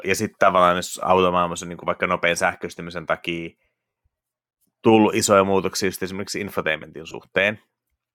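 Lost LE Audio frames at 3.88 s, right after "vaikka nopean sähköistymisen takia": about 80 ms goes missing, and the decoder papers over it by replaying the last spectrum with scrambled phase, so you get a brief noisy smear that fades. Again at 7.08 s, after "muutoksia just esimerkiksi infotainmentin", several short gaps, the longest around 20 ms, are spread over 60 ms and sound like a quick fizzy stutter.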